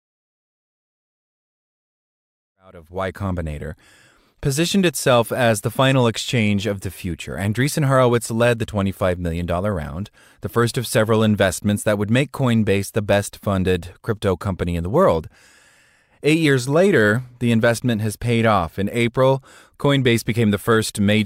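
Nothing here needs flagging: the speech comes up in a gentle, editor-style fade-in that starts at around two and a half seconds and reaches full level by 3.55 s without any click or hard edge, and nothing else in the clip stands out as a problem.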